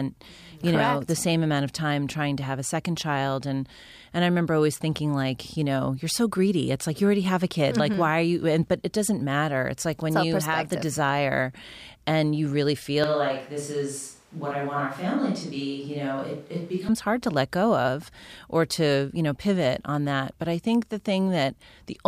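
Speech recording in which the close microphone's feed was likely lost for a stretch, leaving a switch to a distant microphone from 13.04 s to 16.89 s, between "desire and you really" and "hard to let go". The sound abruptly turns roomy and hollow and loses low end. The level falls by around 5 dB, and room noise rises to roughly 30 dB below the speech. It snaps back to the close, fuller sound just as suddenly.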